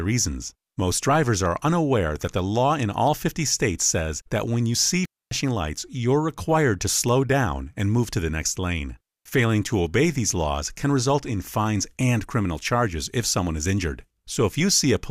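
At 5.05 s the speech cuts to near silence for about 0.26 s, and at 9.13 s for 0.12 s. Both are digital wireless dropouts. The receiver lost too much data and muted with a very short fade, leaving clean holes without noise bursts.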